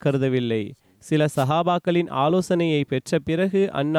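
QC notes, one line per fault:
1.35–1.46 s, wireless microphone noise hit: a short burst of static, about 0.11 s long, sweeps across the speech. The radio link from the analogue FM microphone dipped as reflected signals cancelled at the receiver, so receiver noise rose and covered the voice for that moment. On a spectrogram it shows as a brief broadband vertical smear of noise laid over the speech harmonics. On the waveform it appears as a rough, hashy patch with a raised noise floor.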